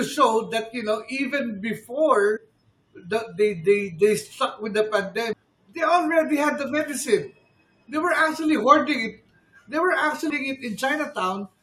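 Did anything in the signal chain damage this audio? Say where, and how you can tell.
Yes, at the codec stage: damaged data in the compressed stream. Short blips land at 2.36–2.38 s, 5.32 s after "stuck with the", 7.58 s before "they were actually", and 10.29 s after "they were". Corrupt frames knock the decoder out of sync until it finds the next header.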